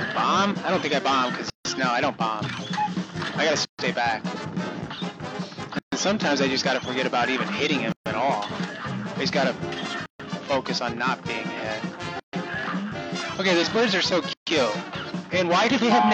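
At 1.50 s a silence of about 150 ms opens, then 136 ms gaps follow at 3.65, 5.79, 7.92, 10.06, 12.20 and 14.33 s: a gap at a join of encoded pieces every 2 s of sound, where untrimmed encoder delay and last-frame padding remain. Each gap has smeared edges, and the sound then resumes where it stopped.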